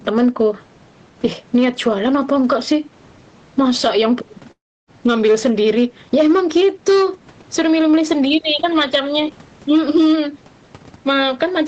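From the start to the end of the clip, every loud peak of the speech carries a harsh, crackly edge, a gritty fuzz riding on the strongest syllables. This is hard clipping: the signal was driven about 6 dB past what one stage could pass, so the loudest peaks, roughly one or two percent of samples, were sliced flat. Those squared-off tops add harmonics high up the spectrum, which is the crackle heard on each peak.

Also running throughout, loud and quiet passages sit unnaturally close in level, giving a squashed, pressed quality. This is gain pumping, with the level swinging by around 10 dB. The likely cause is input gain set far too high for the microphone, with a fast limiter or compressor clamping down on every loud sound and releasing in the gaps.

At 4.51 s the audio breaks off. A short fading buzz continues the last sound before it drops away, leaving about 0.29 s of near silence. The speech returns at 4.90 s with a piece missing rather than picking up where it stopped. 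This is a long network dropout: roughly 0.36 s of audio most likely never arrived, and the receiver filled the gap by stretching out the final sound until nothing was left to continue.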